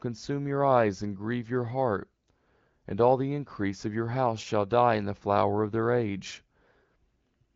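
No technical faults can be heard in this speech, which carries the band-limited, lightly coded character of an AMR wideband (HD Voice) call, with nothing above about 7.5 kHz and a clarity that fits one of the codec's higher rates.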